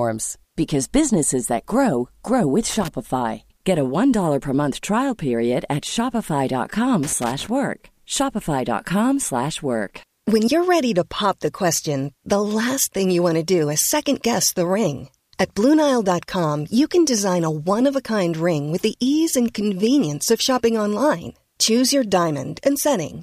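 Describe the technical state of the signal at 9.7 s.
At 9.7 s the speech signal is intact, with no audible technical fault at that moment.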